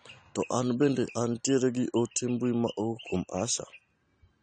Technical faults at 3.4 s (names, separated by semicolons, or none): AAC compression